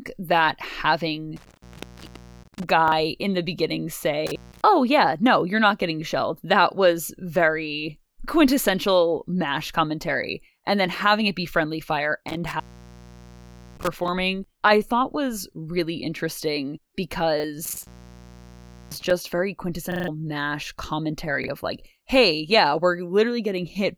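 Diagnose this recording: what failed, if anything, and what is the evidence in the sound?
Intermittent contact in the analogue wiring at 1.36–2.69 s (ending just before "in the beginning"), 4.27–4.61 s, 12.28–14.08 s and 17.65–19.11 s. A loose plug or cable opens for 0.17 to 1.17 s, so the speech drops to faint hiss, with crackle at each break and reconnection.

Repeated buffer at the driver or buffer stage at 2.88–2.92 s, 17.40–17.44 s, 19.92–20.08 s and 21.44–21.48 s (just before "of like hey yeah"). Fresh audio arrived late, so a 40 ms block replays with hard joins, once at most points and four times at 19.92 s, where it stutters and about 150 ms is lost.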